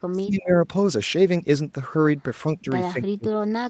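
From 0.09 to 0.55 s the speech sinks by about 30 dB, dips slightly around 2.62 to 2.66 s, then drops about 35 dB from 2.92 s to the end. That's speech suppressed in double talk, likely the echo canceller mistaking the talker for echo.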